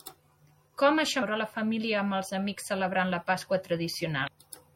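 Throughout the speech, likely MP3 compression running short of bits, which fits a bitrate near 64 kbps, leaves a plainly watery, swirling texture. At 1.21 s, just before "la família amb els", and again from 4.24 to 4.29 s, damaged data in the compressed stream makes the decoder lose frame sync, producing a brief glitch.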